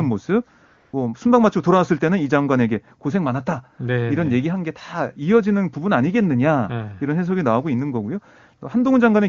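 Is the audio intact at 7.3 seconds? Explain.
Yes, the speech at 7.3 s is intact, carried through the AMR wideband (HD Voice) codec at its clear 23.85 kbit/s rate, with no dropout, click or distortion at that moment.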